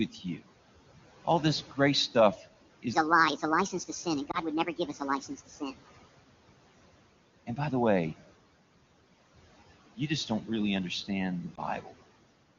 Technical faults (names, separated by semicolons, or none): noise suppressor artifacts; speech cut by the noise suppressor; lost AMR speech frames